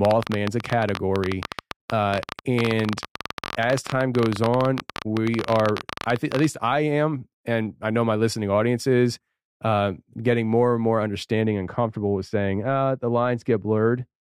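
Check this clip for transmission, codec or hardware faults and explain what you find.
Two faults turn up in this speech clip: a click train over the first half and a spell of misapplied de-emphasis at the end.

From 0.05 s to 6.45 s, just before "I am and I", there is a train of clicks. Some outside source injects short pulses into the signal, likely interference from nearby equipment or a faulty connection or power supply. They arrive at about 16.7 per second at an irregular pace, roughly a hundred in all, peaking about 15 dB above the speech. The result is a ragged ticking and popping that stays audible through the pauses.

From 11.42 s to the end at 14.27 s, after "getting more and more", de-emphasis has been applied wrongly. A treble-cut filter meant to reverse pre-emphasis was run on audio that didn't need it, or was run a second time. The response tilts smoothly downward, reaching about 14 dB down at 10 kHz relative to 1 kHz, so the closing stretch sounds dull and muffled, with consonants losing their edge.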